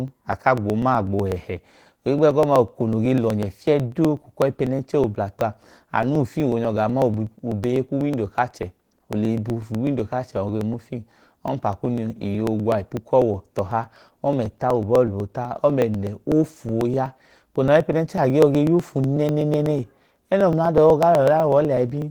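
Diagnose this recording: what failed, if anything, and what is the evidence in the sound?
The codec stage shows Opus voice compression at a low rate, about 16 kbps, running in hybrid mode: a SILK linear-prediction layer carries the lower band and a CELT layer codes the top, so the band stays nearly full. At that bitrate the excitation is quantised coarsely, and the damage is plainly audible throughout the speech as a muffled, hoarse, slightly robotic quality, coded in 20 ms frames.

At the driver or buffer stage there are periodic USB or driver dropouts, from 0.08 s to 22.02 s. Every 0.124 s a short slice of audio, about a millisecond, is skipped rather than filled, so the waveform jumps and produces a regular tick, roughly 200 in total. The strict regularity points to a background task stalling the USB bus or audio driver on a fixed timer, not to network loss.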